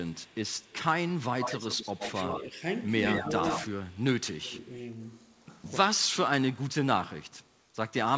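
From 0.1 to 2.4 s there's an echo leak: a copy of the speech trailing the original by 119 ms, only about 10 dB down. The far end's echo canceller was likely leaving part of its loudspeaker pickup in the return path. It comes back from 3.07 to 4.03 s, louder at about 5 dB below the speech, and again from 7.29 to 7.61 s, where it's barely there at about 40 dB down.

During and after those stretches, the speech ducks in short bursts. That's speech suppressed in double talk: with both sides active, the canceller likely couldn't separate its own talker from the echo and pulled everything down. The dips fall at 2.26 to 2.61 s and 3.21 to 3.27 s, both shallow at about 5 dB. They get deeper at 4.27 to 4.74 s (about 15 dB) and 6.71 to 7.0 s (about 20 dB). The worst is 5.92 to 6.17 s, where the speech nearly vanishes at around 30 dB down. Under all of it the band stops at 8 kHz, which fits a wideband call codec like G.722.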